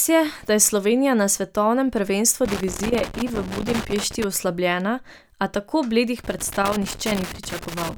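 From 2.45 to 4.24 s, and again from 6.19 s to the end, the speech is broken by loose connector crackle: a worn or dirty contact intermittently opening and closing, chopping the signal and adding pops from any DC offset on the line. It sounds like irregular scratchy bursts. A waveform shows jagged dropouts and sharp spikes; a spectrogram shows scattered full-band vertical streaks over the speech.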